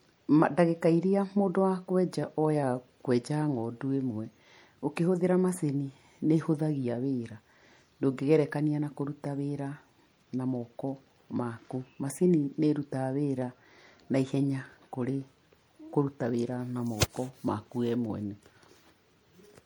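From start to finish the speech sounds watery and swirly with dulled treble, likely MP3 compression near 64 kbps; that flicker sets it apart from plain low-pass filtering.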